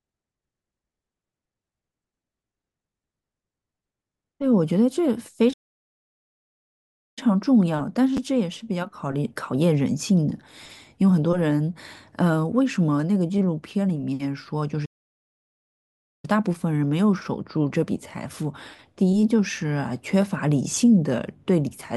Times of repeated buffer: 8.17, 13.38, 20.22

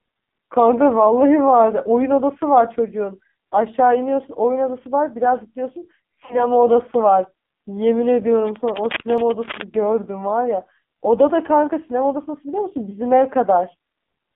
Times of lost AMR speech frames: 6.25-6.46, 12.89-12.96

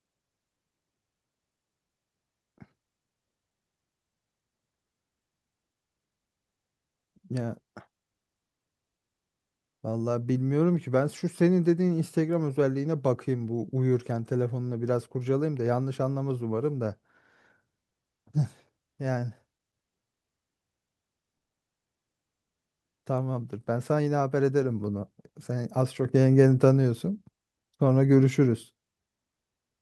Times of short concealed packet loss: 21.60-21.63

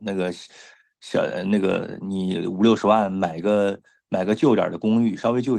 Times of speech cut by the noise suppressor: none

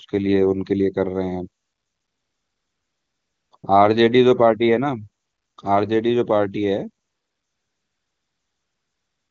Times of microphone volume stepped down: none

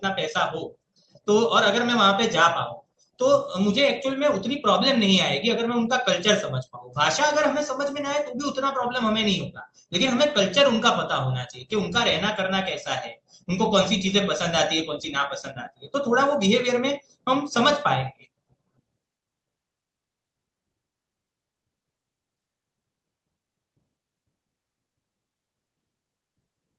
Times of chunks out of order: none

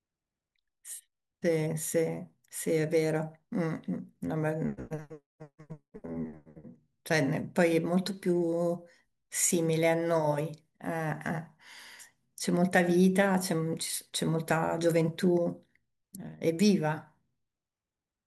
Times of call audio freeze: none

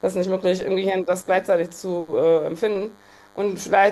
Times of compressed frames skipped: none

